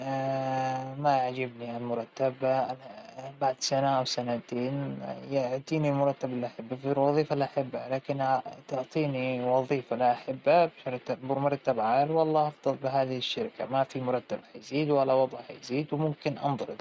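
Nothing's wrong here: the speech has simply been through a call's microphone processing, which trims the deepest bass and leaves nothing above 8 kHz, and that's just how such a call normally sounds.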